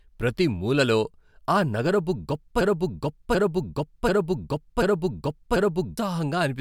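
From 2.61 to 5.98 s, a broken-record loop repeats one 0.74 s speech fragment five times, undecaying unlike echo, likely from a stalled stream.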